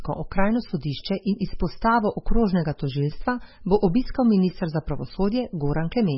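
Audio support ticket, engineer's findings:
MP3 compression, whole clip. Speech sounds watery and swirly, attacks smeared, nothing above 5.6 kHz. Likely an MP3 encoder starved of bits, consistent with about 16 kbps: treble cut at a fixed point, weak spectral lines flickering between frames.

Clock slip clicks, 0.43 to 4.97 s. Faint regular ticks, about four, roughly every 1.5 s. Likely two free-running clocks with no sync, a mismatch of around 15 ppm, each slip one sample dropped or repeated.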